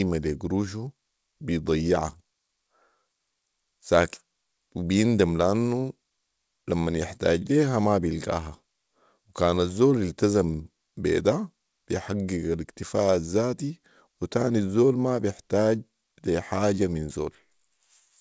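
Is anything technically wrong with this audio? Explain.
No, nothing in this speech clip is technically wrong. It has the sound of a working call path, with no content above 8 kHz and the usual coding noise, which fits a wideband codec such as G.722 at 64 kbps.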